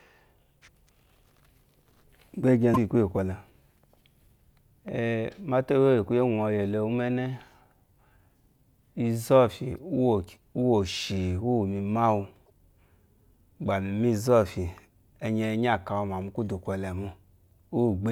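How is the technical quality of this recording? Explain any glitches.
Two brief glitches break into this speech recording, at 2.71 s and 12.42 s, each a short squawk or blip lasting about 70 to 80 ms. Both come from damaged data in a compressed stream. Part of the compressed file was corrupted there, so the decoder misread or rejected those frames, lost sync and had to hunt for the next valid frame header. The garbled frames are what sound like those chirpy bursts.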